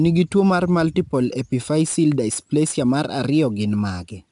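From start to finish, 4-bit ADPCM compression at a rate that fits roughly 89 kbps leaves gritty, level-tracking hiss on the speech, with nothing above 10.6 kHz.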